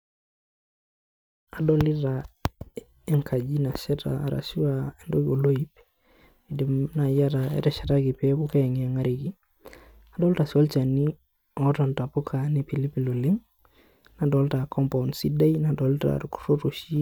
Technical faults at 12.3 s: none

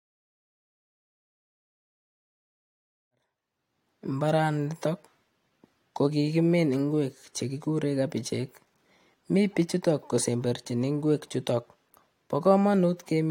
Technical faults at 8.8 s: none

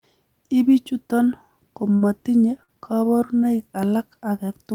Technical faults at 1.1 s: none

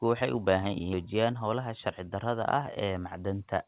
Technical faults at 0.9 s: skip ahead

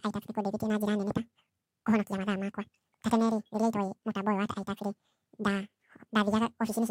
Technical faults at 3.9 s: audio read two samples at a time (double speed)

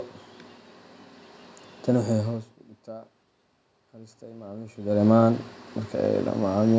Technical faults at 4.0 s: automatic gain rising

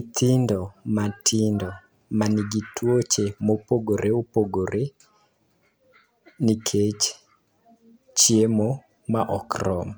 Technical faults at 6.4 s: none

